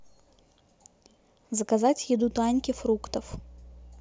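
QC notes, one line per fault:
2.23 to 4.00 s, mains hum: a steady 60 Hz drone comes in partway through and sits under the speech to the end, roughly 20 dB down. That's power-line coupling, a ground loop or a nearby transformer leaking the mains frequency into the signal path.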